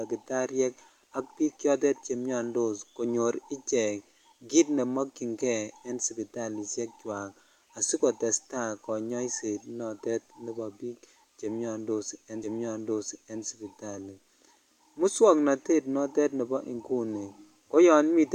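At 12.43 s the player queues the same stretch of the stream twice, a stream segment repeated fault. Rather than moving on to the next segment, it plays back one it has already delivered, so from 12.43 s to 13.43 s a full second of the speech is heard again. A small blip marks the jump back where the earlier audio restarts, and the duplicate pushes everything after it one second later than it should be.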